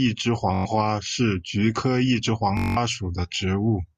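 At 0.54 s the speech breaks into a Bluetooth stutter lasting until 0.65 s: the receiver, starved of packets, replays its last short buffer, giving a rapid machine-gun buzz. When data returns, the speech resumes about 0.11 s further on, that stretch skipped. A longer Bluetooth stutter runs from 2.57 s to 2.77 s, losing about 0.19 s, which fits a longer run of consecutive packets going missing.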